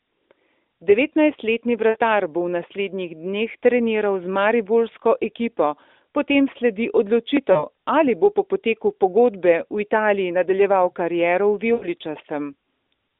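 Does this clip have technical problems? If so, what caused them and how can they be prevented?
Yes: lost AMR speech frames at 1.90–1.97 s (just before "bo v naslednjih dneh"), 7.52–7.64 s and 11.74–11.87 s. The decoder repeats the last good frame with falling gain, giving smeared, fading sound. A spectrogram shows frozen, fading harmonics, and the waveform shows a shrinking envelope. Better radio coverage or stronger channel error protection prevents it.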